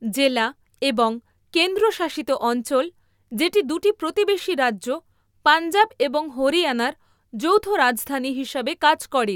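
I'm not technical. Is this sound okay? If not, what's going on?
Yes, nothing stood out as a problem when I listened to this recording.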